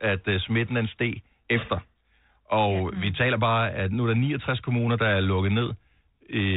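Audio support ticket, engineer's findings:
No faults found on listening.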